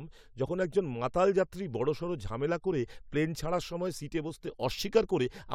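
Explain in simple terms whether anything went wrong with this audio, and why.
Nothing went wrong on the technical side: the speech comes through as one steady, unbroken signal with no faults to point to at any moment.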